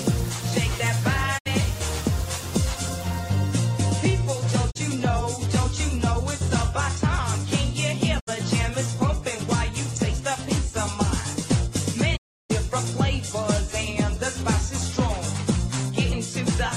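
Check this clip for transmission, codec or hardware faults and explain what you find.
Four digital broadcast dropouts interrupt the audio, at 1.37–1.48 s, 4.70–4.77 s, 8.19–8.29 s and 12.16–12.52 s. Each time the receiver stopped getting decodable frames and muted, fading out over about 20 ms before returning. The silent stretches (64, 32, 64 and 320 ms) fit the loss of whole frames of about 32 ms each. The longest gap is a hole. The sound simply skips ahead, and what was transmitted during the gap is lost. On a waveform each dropout is a short ramp to silence. A spectrogram shows full-height blank columns.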